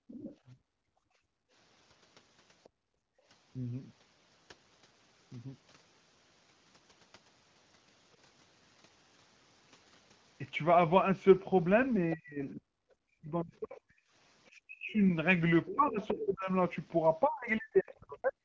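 From 0.0 to 1.53 s, the background is gated by the echo canceller. The room sound dips by about 33 dB, for roughly a second in all. The canceller pulled the microphone down hard while its loudspeaker played. The ambience then returns.

From 0.08 to 0.36 s, a faint second voice sits about 20 dB under the talker. This is likely the other side's voice leaking through. The loudspeaker's output reached the microphone, and the canceller did not remove it all.

A brief scrap of that leak comes back from 2.64 to 2.69 s, far lower, about 35 dB down. Right after, from 2.69 to 3.25 s, the background is gated again. It drops by about 31 dB, for roughly half a second.

From 12.15 to 18.36 s, the talker's own speech is pushed down in pieces. The dips reach about 40 dB and add up to roughly four seconds. This is likely speech suppressed in double talk. Both sides spoke at once, and the canceller could not separate its talker from the loudspeaker echo, so it turned both down.

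Within that stretch, from 15.65 to 16.26 s, the other side's voice leaks through much more plainly. It sits only about 10 dB below the talker.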